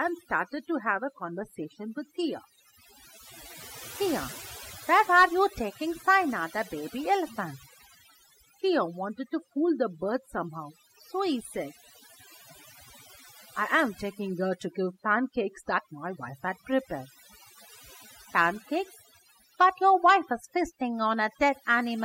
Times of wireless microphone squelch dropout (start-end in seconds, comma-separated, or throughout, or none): none